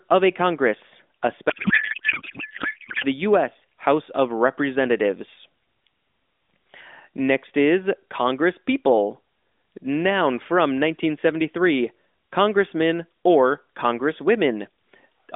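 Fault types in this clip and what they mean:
Codec payload misread: AMR frames unpacked with fields misplaced, fitting octet-aligned packing read as bandwidth-efficient; from 1.50 to 3.05 s speech turns to garbled warble.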